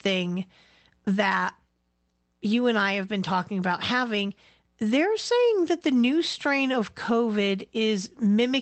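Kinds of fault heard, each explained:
No kinds of fault are heard in this clip.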